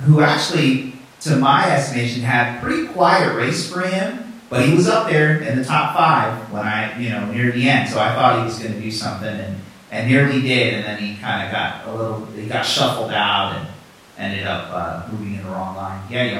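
No faults are audible anywhere in the recording.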